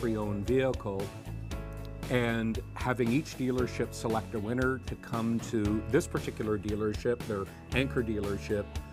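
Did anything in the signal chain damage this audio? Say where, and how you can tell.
No, nothing in the signal chain damaged this audio.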